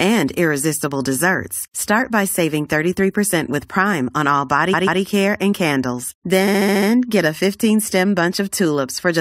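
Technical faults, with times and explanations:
4.73 to 5.00 s, repeated frames: a 139 ms block, likely about six compressed frames, plays twice more, stuttering and adding 279 ms.
6.47 to 6.89 s, repeated frames: a shorter 70 ms block, about three frames, repeats six extra times, a rapid stutter, adding 418 ms.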